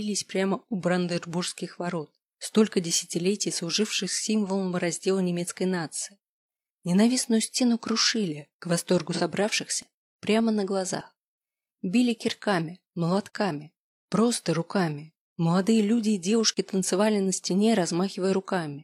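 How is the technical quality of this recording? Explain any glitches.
There is one glitch, an AAC frame loss with concealment, at 9.12 to 9.21 s. About 43 ms of coded audio went missing, which fits a single lost AAC frame. The decoder filled the gap by reusing the last good spectrum with randomised phase, so the moment sounds smeared and noisy or phasey rather than cutting out. Because sound continues through the gap, it is distinguishable from a true dropout, which would leave brief silence or a hard click at its edges.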